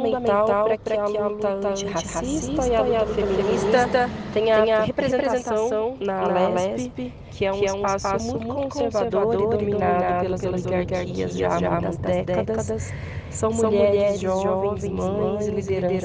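A doubled audio track runs through the whole clip: every sound is followed by a second, full-band copy about a fifth of a second later, at roughly the same loudness as the original. Unlike an echo or reverberation, the repeat happens once, without decay or room colouring, so it sounds like a duplicated track rather than a reflection. The likely cause is the signal being captured twice, once through a slower path, or an edit leaving two copies out of step.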